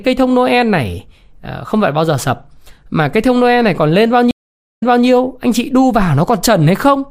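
From 4.31 to 5.06 s, after "này còn lên bao", a stream reconnect leaves a flat 0.46 s gap in the waveform, then a fresh decoder replays from 0.29 s earlier before "anh chị đu".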